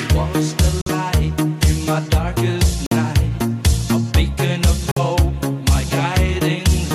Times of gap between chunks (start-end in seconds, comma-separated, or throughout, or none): 0.81-0.86, 2.86-2.91, 4.91-4.96